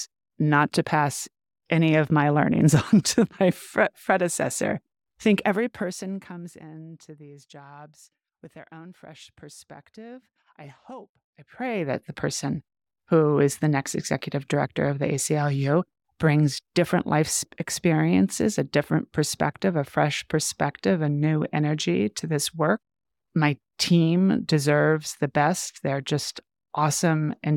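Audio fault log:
5.31–6.64 s and 11.16–12.10 s: zipper noise. Level falls around 25 dB before "these jobs with their", then rises around 25 dB after "fresh perspective I hope", in unsmoothed steps about 50 times per second; each step clicks, producing rapid ticking.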